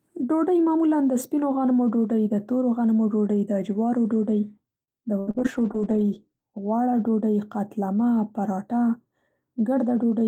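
Right after "ډوډۍ د جوارو ډوډۍ", at 4.83 to 4.91 s, there's a short stall from a late packet. The jitter buffer ran dry, so the receiver stretched the last sound by about 44 ms. Nothing's lost, but the delay grows by that much, and you hear a held sound with a slight buzz or dip.

Then at 5.20 to 5.30 s comes a burst of packet loss. About 80 ms of audio never arrives. The receiver papers over it with roughly 72 ms of continued, fading sound, which comes across as a held buzz or a fading hiss before the speech picks up further along.

Almost immediately after, at 5.31 to 5.37 s, there's a short concealed packet loss. Another 40 ms goes missing, patched with about 34 ms of extrapolated sound that blends back in. It's a quick smear or wobble, and anything very short in that spot can just vanish.

From 5.39 to 6.56 s there's a call bitrate drop. The bandwidth estimate fell, and the encoder went from 32 to 14 kbps, staying at the bottom for about 1.1 s. 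The speech turns rougher, a bit watery and duller on top, before it recovers right ahead of "غوړه ډوډۍ".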